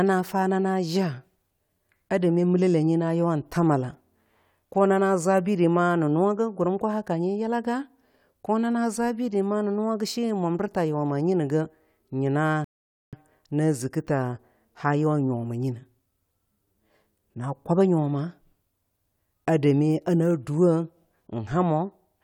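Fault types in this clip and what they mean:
Rebuffering stall: playback drained its downloaded audio and paused until more data arrived, so the speech drops to silence at 12.64 s for about 0.48 s, then picks up exactly where it stopped with "na ziki ta haa". Nothing is skipped, but the clip runs longer. Waveform and spectrogram show a clean blank gap, with the energy continuing unchanged on both sides.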